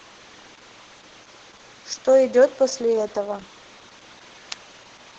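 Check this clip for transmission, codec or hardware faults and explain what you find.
One codec fault runs through the whole clip: Opus voice compression. Throughout the speech, the top end stops near 8 kHz, and the voice sounds muffled, hoarse and faintly robotic. That points to the SILK linear-prediction coder working at a very low rate, around 10 kbps, where it codes the excitation coarsely and the damage is heavy.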